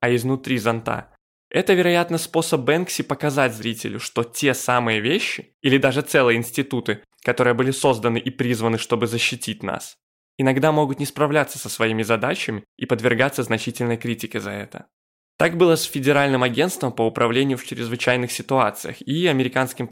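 A speech recording, and no technical fault can be heard anywhere in it. There is nothing here that needs a time stamp or a cause.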